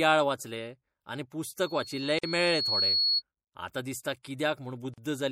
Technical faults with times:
0.00-5.32 MP3 compression
2.19-2.23 gap at a join of encoded pieces
4.94-4.98 gap at a join of encoded pieces

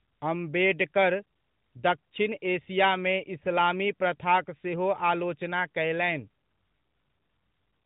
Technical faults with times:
none

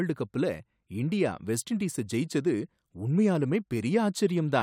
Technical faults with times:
none

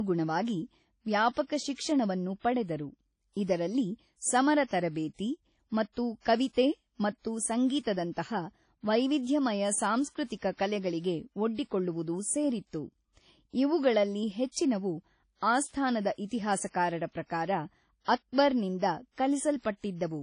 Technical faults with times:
0.00-20.23 WMA compression

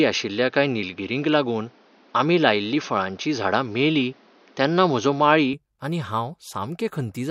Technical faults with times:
0.00-5.53 input switched to a poorer device

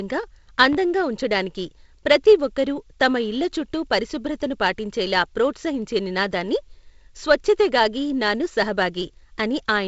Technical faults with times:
0.73-0.77 loud pop

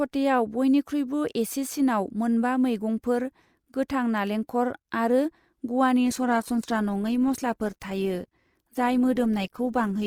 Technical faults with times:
6.05-10.07 adaptive stream at a lower bitrate

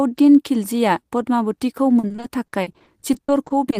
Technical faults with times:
1.99-3.79 repeated packet loss (robotic sound)

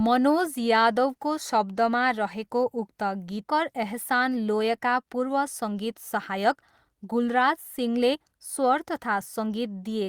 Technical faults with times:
3.47-3.49 skip ahead
3.59-5.94 jitter buffer speed-up
6.37-9.69 jitter buffer speed-up

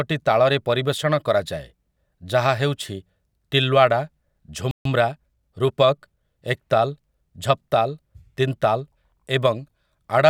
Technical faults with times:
4.71-4.85 playback stall
4.85-6.25 time-compressed catch-up

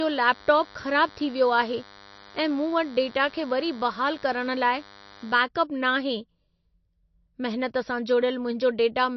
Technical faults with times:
0.00-9.16 MP3 compression
0.00-5.38 DECT cordless phone buzz

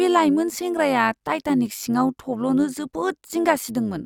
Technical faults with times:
0.00-4.06 overlap-add ripple

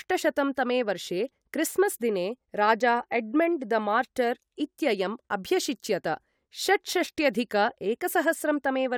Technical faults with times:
none

